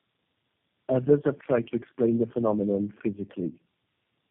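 Throughout, tandem speech coding, repeated low-rate re-encoding consistent with four speech codecs in a row, leaves the speech rough and warbly, with smeared harmonics and a hard spectrogram ceiling at 3.3 kHz.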